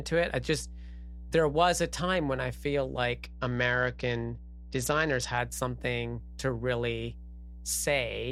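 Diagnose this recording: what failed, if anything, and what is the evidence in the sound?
Mains hum from the analogue wiring stage runs through the whole recording: a steady 60 Hz tone with low harmonics, around 15 dB below the speech. A spectrogram shows unbroken horizontal lines at 60 Hz and its multiples, which points to a ground loop or nearby transformer coupling power-line current into the signal.

A Bluetooth SBC bit pool drop at the codec stage hits from 3.25 to 5.38 s. The speech loses its treble and picks up a gritty, coarse noise, then recovers. On a spectrogram the upper bands go blank or patchy over that span, with speckled quantisation noise below. This fits the link cutting the bit pool from about 28 to about 9, near 78 kbps, under congestion.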